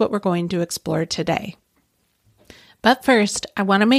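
No technical faults can be heard anywhere in this speech recording. There is no moment in it that needs a timestamp.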